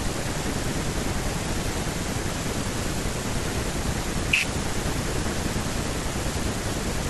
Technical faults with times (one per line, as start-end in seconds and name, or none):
none